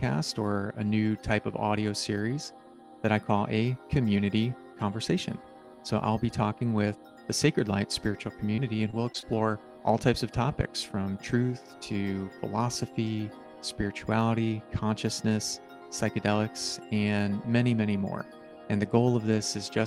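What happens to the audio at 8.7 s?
At 8.7 s the sound is in the middle of a burst of repeated packet loss, lasting from 8.52 to 9.24 s. Over that stretch, audio data goes missing six times in quick succession. Each hole is filled by stretching out the sound that came just before it. The longest gap is 23 ms. About 14% of the stretch is patched this way. The result is choppy, with pieces missing.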